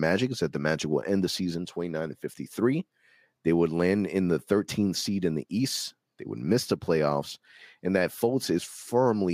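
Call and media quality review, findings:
No faults found in the speech clip; nothing to escalate.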